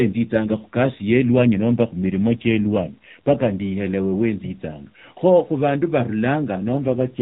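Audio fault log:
0.40–3.52 s and 6.65–7.22 s, AMR rate drop: the narrowband speech turns rougher and more synthetic with no gap or band change, consistent with a fall from 12.2 to 5.9 kbps.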